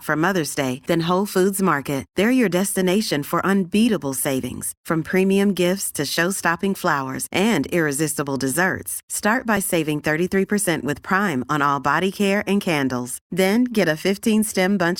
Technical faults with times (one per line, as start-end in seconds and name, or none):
9.57 overlap between stream segments